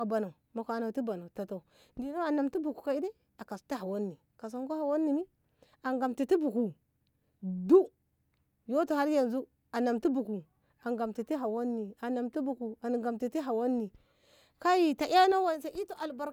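No dropouts, clipping, distortion or timing faults are audible anywhere in the recording.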